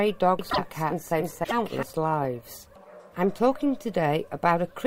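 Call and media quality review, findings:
Doubled audio track, 0.39 to 1.83 s: second full-band copy roughly 0.3 s behind, about as loud, no decay or room colour, abrupt onset and cutoff. Waveform shows repeated envelope shapes offset by the delay; spectrogram shows duplicated patterns side by side. Likely cause: a slower capture path or misaligned edit layering two copies.

Broken MP3 bit reservoir, 0.49 to 0.58 s and 1.43 to 1.52 s: audio skips forward, then a short chirp, noise burst or hole lasting a few 24 ms frames. Spectrogram shows vertical smears or blank slots; waveform shows a discontinuity. Likely cause: dropped frames, so later frames read borrowed bytes from the wrong frame.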